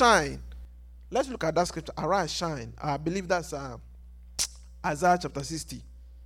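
At 0.65 s the speech abruptly drops by about 6 dB and stays lower to the end. One channel drops out, likely because one side of the stereo signal was lost. When the channels are summed to mono, only half the shared level remains.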